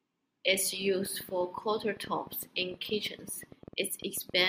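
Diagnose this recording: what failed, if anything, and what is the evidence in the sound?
A train of clicks runs from 1.06 s to 4.42 s: roughly thirty sharp, similar ticks at about 9 per second, unevenly spaced, each about as loud as the speech itself and audible through the pauses as well. Their matching shape and independence from the speech point to something outside the signal adding pulses, likely interference coupling into the analogue wiring from nearby equipment, or a faulty connection or power supply.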